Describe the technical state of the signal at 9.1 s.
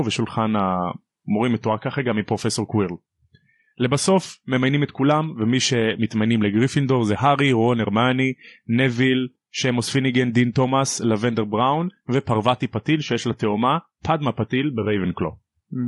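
At 9.1 s the speech carries plainly audible low-delay AAC compression, present throughout the clip rather than just at that moment. It sounds rough and grainy, with noise filling the gaps between harmonics, most likely from AAC-ELD at a rate that fits around 32 kbps, where its short frames resolve pitch poorly. On a spectrogram the harmonic lines look smeared, with speckled energy between them and a blurred, patchy upper band.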